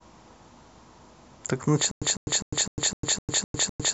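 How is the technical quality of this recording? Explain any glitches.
There's one real problem. From 1.91 s to the end, it's stutter with silent gaps: a 152 ms burst repeats eight times, each followed by 102 ms of dead silence. That's likely a stalled stream replaying its last fragment.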